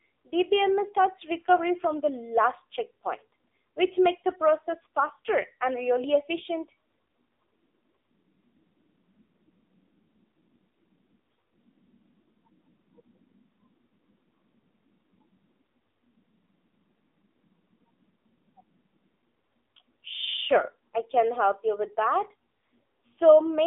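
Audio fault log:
throughout, AMR narrowband mobile codec: the speech sounds thin, boxed-in and plainly buzzy, with nothing above 3.7 kHz and little below 250 Hz. A vocal-tract model rebuilds each 20 ms frame from sparse pulses, and the synthetic edge fits roughly 7.4 kbps.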